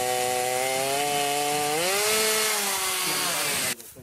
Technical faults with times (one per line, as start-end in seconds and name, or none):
none